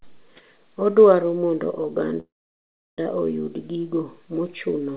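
From 2.2 to 3.01 s the speech halts in a call audio freeze: a brief trailing continuation, then about 0.7 s of silence, likely from delayed packets draining the jitter buffer. Unlike a loss dropout, speech resumes exactly where it stopped, now running 0.78 s late, over a band-limited call path with nothing above 4 kHz.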